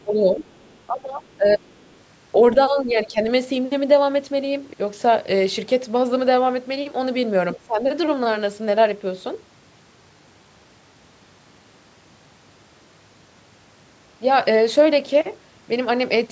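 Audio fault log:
0.00–0.04, 0.48–0.78 and 1.34–1.95 s, other side's voice leaking through: a faint second voice sits well under the talker, about 35 to 40 dB down, in short scraps. That's likely loudspeaker playback the echo canceller didn't fully scrub from the mic.
0.04–0.39, 0.88–1.61, 2.70–3.18 and 7.56–7.86 s, speech suppressed in double talk: the talker's voice ducks by about 10 to 15 dB for a few hundred milliseconds each time. The echo canceller likely couldn't separate the talker from the echo during overlap, so it turned both down.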